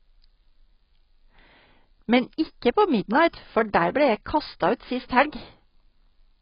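A speech recording that sounds dull and muffled from start to finish. Nothing is present above about 5.2 kHz, so sibilants lose their edge and the top end is simply missing. The damage is heavy. There is a smeared, warbling, watery texture on sustained sounds and a fizzy quality on the consonants that remain. The likely cause is AAC compression, specifically AAC-LC at a very low bitrate that fits around 16 kbps.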